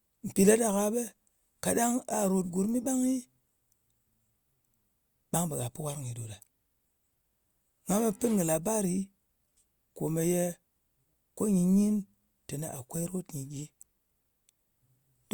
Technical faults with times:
none

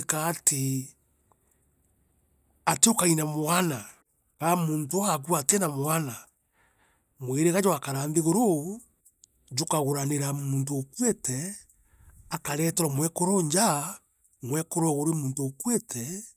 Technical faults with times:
none

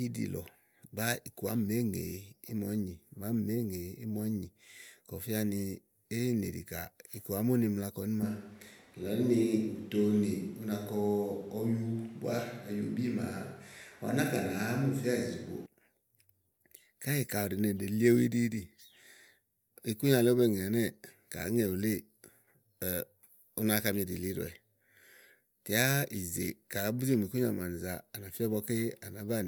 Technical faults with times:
8.23-15.66 switch to a distant microphone

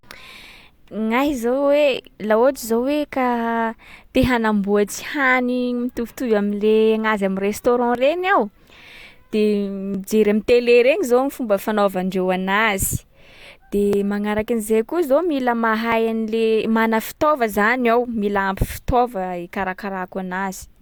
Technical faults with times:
1.97 overlap between stream segments
3.97 overlap between stream segments
5.96 overlap between stream segments
7.95 overlap between stream segments
9.94 overlap between stream segments
11.94 overlap between stream segments
13.93 overlap between stream segments
15.92 overlap between stream segments

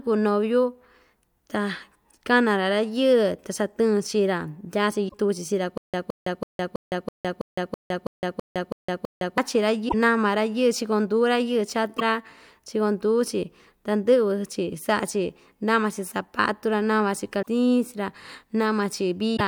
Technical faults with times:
5.05-5.14 damaged data in a compressed stream
5.78-9.38 stutter with silent gaps
9.85-9.94 damaged data in a compressed stream
11.96-12.02 damaged data in a compressed stream
17.39-17.47 damaged data in a compressed stream
19.33-19.41 damaged data in a compressed stream

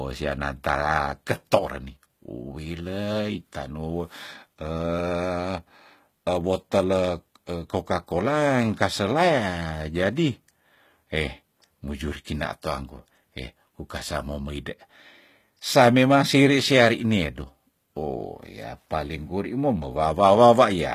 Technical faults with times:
0.00-20.94 HE-AAC compression

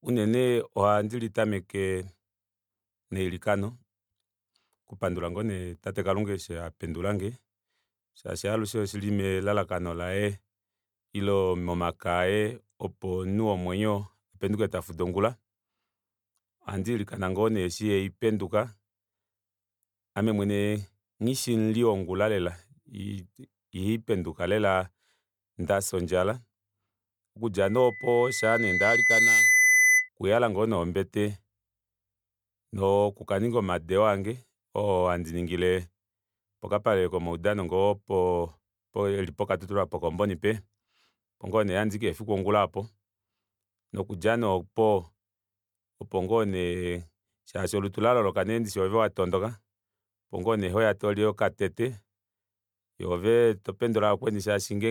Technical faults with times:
0.00-54.90 generation loss
27.62-30.09 loudspeaker feedback squeal

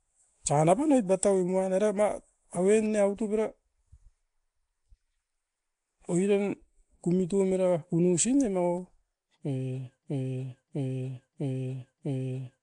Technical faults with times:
0.00-12.62 Nellymoser compression
10.03-12.62 broken-record loop

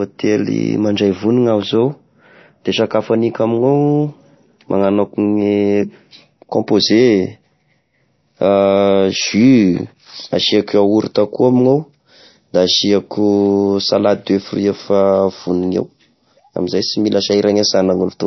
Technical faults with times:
0.00-18.27 low-bitrate audio saved at a high bitrate

